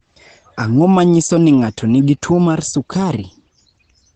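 Across the whole clip the speech carries heavy Opus compression damage, most likely from the encoder's SILK speech mode at a low rate, fitting about 12 kbps. Nothing survives above 8.8 kHz, so the voice sounds muffled and hoarse.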